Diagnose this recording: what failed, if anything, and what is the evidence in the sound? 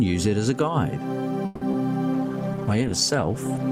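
Gain pumping at the call-processing or input stage: throughout, the gain swings by roughly 10 dB, pulling loud and soft parts closer in level. This is likely an overdriven gain feeding a fast limiter.

Call audio freeze at the network and jitter-buffer stage: from 1.45 to 1.63 s the last sound is stretched into a fading buzz for about 160 ms, likely because delayed packets emptied the buffer. Nothing is missing afterward, which separates it from loss.

Short concealed packet loss at the network stage: a brief smear between 1.71 and 1.75 s. About 20 ms of audio never arrived and was replaced by extrapolation, so unlike a freeze, the content is dropped rather than delayed.

Call bitrate drop at the codec stage: from 2.14 s to the end the sound turns watery and muffled as the encoder falls from 128 to 14 kbps, staying lowest for about 1.03 s. The dulling persists rather than ticking briefly.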